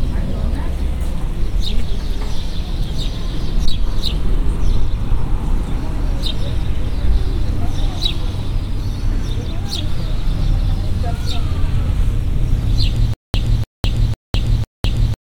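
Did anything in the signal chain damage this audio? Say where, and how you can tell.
Yes. From 13.14 s to the end, a 296 ms burst repeats four times, each followed by 205 ms of digital silence on a steady 501 ms cycle: a stutter with silent gaps. The likely cause is a stalled playback or stream buffer replaying its last fragment at each retry, so the audio meant for that stretch is lost.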